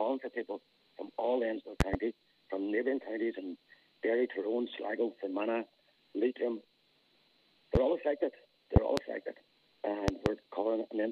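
Loud pops show up four times: a double pop from 1.81 to 1.97 s, a single one at 7.75 to 7.79 s, then doubles at 8.76 to 9.01 s and 10.08 to 10.29 s. Each spikes roughly 20 to 25 dB above the audio, a sharp thump with the sound carrying on underneath. That pattern is likely a voltage step or pulse, say a switch, plug or static discharge, getting into the signal chain.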